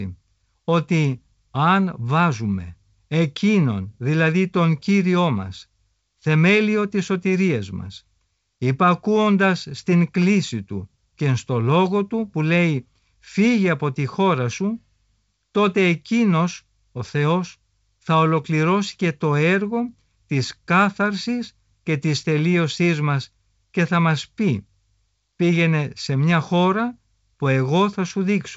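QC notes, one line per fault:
The speech is carried through G.722 wideband telephone coding at 64 kbit/s, which leaves content up to about 7.7 kHz with nothing above it, and any trace the coding leaves on the sound is faint at most.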